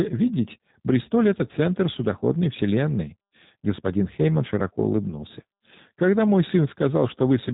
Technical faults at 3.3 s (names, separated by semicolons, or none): G.729 codec